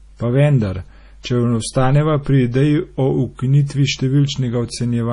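Throughout the clip, heavy MP3 compression, likely at a low bitrate around 32 kbps, starves the encoder of bits. It removes everything above 10.6 kHz and drops weak frequency lines from frame to frame, so the speech sounds dull, watery and swirly, with metallic chirping on s sounds.

From 1.23 to 1.25 s, just before "če ostaneva pri", there is pre-echo. A sharp onset fell late in a transform block, and quantisation noise sized for it spread about 21 ms ahead into the quiet gap. This produces a brief hiss before the attack, which sounds softened and smeared.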